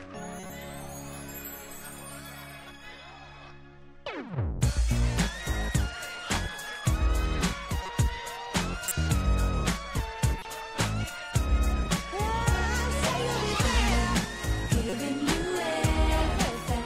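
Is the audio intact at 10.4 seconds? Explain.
No. From 10.39 to 10.45 s a corrupt frame was decoded: flipped bits in a couple of compressed frames were played anyway, misplacing energy across frequencies. It sounds like a brief chirpy blip peaking around -25 dBFS, seen as a short vertical smear on a spectrogram.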